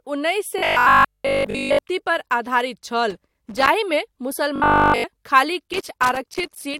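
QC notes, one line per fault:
0.59–1.79 s, robotic sound from repeated short buffers: most of the audio becomes a rigid 50 Hz metallic buzz, likely 20 ms chunks replayed; steady pitch, unlike crackle.
3.10–3.69 s, loose connector crackle: irregular scratchy bursts as a contact makes and breaks; random, with no fixed pitch, unlike the buffer buzz.
4.56–5.06 s, robotic sound from repeated short buffers: entirely replaced by a 50 Hz buzz, likely one 20 ms chunk repeated throughout; tonal and regular rather than crackly.
5.73–6.79 s, loose connector crackle: uneven crackle from an intermittent contact chopping the signal, lasting to the end of the clip, with no steady buzz.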